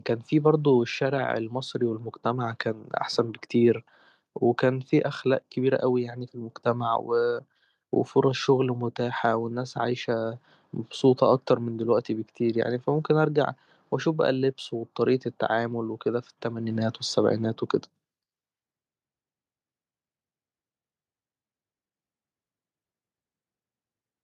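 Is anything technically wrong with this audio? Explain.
No, nothing technically wrong can be heard here.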